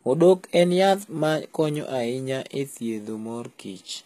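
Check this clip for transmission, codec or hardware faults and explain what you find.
There is one fault, and it runs through the whole clip: the speech carries the sound of HE-AAC compression, likely the cause, with plainly audible codec damage. The treble is not coded directly but rebuilt from copied lower bands under a coarse envelope, so s sounds come out gritty and metallic, and nothing is present above 14.9 kHz. A plain low-pass filter would dull the top instead. The damage level fits a very low rate, around 20 kbps.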